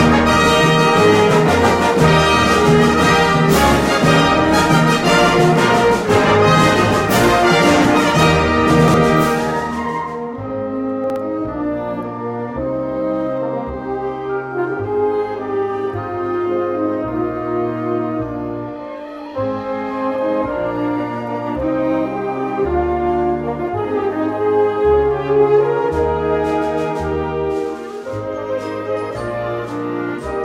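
At 8.7 to 8.94 s and 11.04 to 11.16 s, chunks out of order: a 60 ms chunk plays three, then one, chunks late, giving a jumbled moment without the silence of a dropout.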